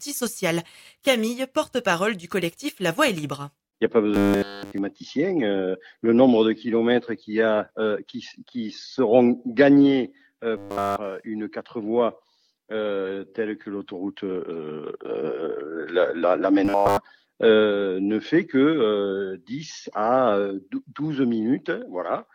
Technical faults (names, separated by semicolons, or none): robotic sound from repeated short buffers